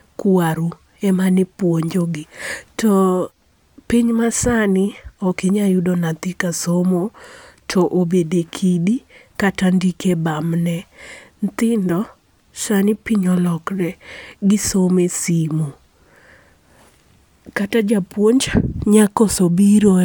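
No technical faults are audible.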